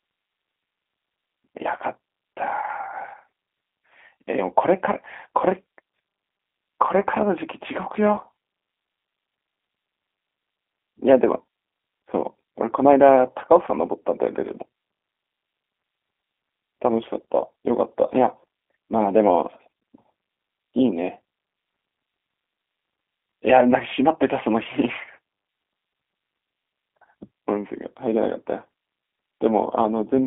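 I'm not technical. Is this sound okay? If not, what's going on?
No. Throughout, the speech has passed through the G.729 codec, a low-rate phone codec that rebuilds the voice from a simplified model. Nothing above about 3.6 kHz survives, so it sounds muffled and thin like a phone line, with a slightly rough, synthetic edge.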